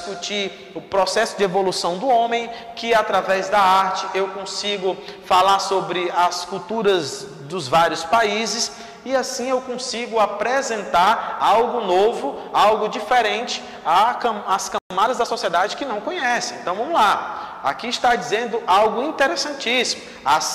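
A playback stall hits at 14.78 s: the sound cuts out in mid-flow and stays silent for 120 ms, until 14.90 s, then resumes. Its likely cause is the player briefly running out of buffered data, or its output thread being held up, so nothing reached the output until the supply recovered.

Time-compressed catch-up follows straight away, from 14.90 s to 15.70 s. To clear the backlog the stall left behind, the player trims out tiny slices and cross-fades across each cut, so the audio runs at about 1.15 times normal speed. Pitch stays where it should be, but the material sounds hurried before pacing returns to normal.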